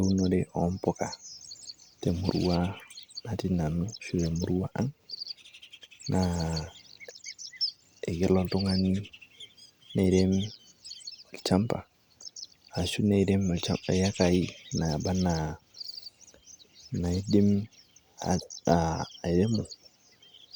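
Speech recording with no audible technical faults anywhere.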